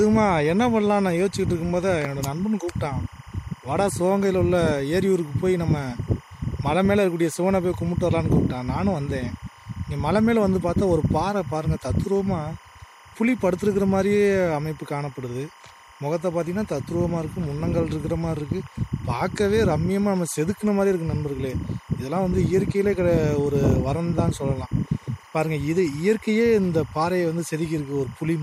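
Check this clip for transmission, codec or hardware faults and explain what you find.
One fault runs through the whole clip: timecode bleed. Linear timecode from an adjacent track or cable is leaking into the audio. The code is a square wave that flips between roughly 1 kHz and 2 kHz as it encodes bits at 25 frames per second. It sits roughly 25 dB below the sound as a steady chirping warble. A plain interference whistle holds one pitch, but this one keeps alternating between two pitches in a rhythmic, data-like pattern.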